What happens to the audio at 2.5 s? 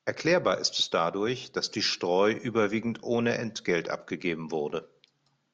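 Nothing goes wrong at 2.5 s; the speech carries on intact through that moment, with no break, click, dropout or change in its sound.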